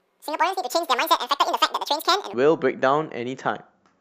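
From 0.00 to 2.34 s a section at the wrong speed plays twice as fast, speech hurried and about ten semitones high, likely from a clock mismatch. Timing and pitch rise together, unlike a pitch shift.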